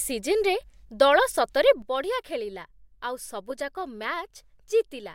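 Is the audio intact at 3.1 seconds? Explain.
No. At 3.1 s the speech sits inside a sudden gain jump that begins at 1.82 s, just after "ଦଳ ସତରେ", and runs to the end. Speech and background noise drop together by about 8 dB at once, likely from a gain change applied without a ramp.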